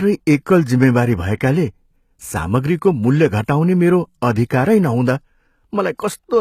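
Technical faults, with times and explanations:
Throughout, HE-AAC compression: s sounds are gritty and lispy, with nothing above 14.9 kHz, likely from treble rebuilt by band replication at roughly 20 kbps.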